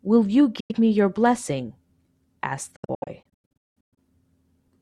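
Audio packets were likely arriving too late at the headphones and being discarded, a Bluetooth dropout. At 0.60 to 0.72 s the speech cuts to silence for about 93 ms, then picks up further along, as though it had kept playing. From 2.76 to 3.98 s the dropouts cluster: roughly 720 ms goes missing in scattered holes, the longest about 186 ms, so the speech stutters and chops.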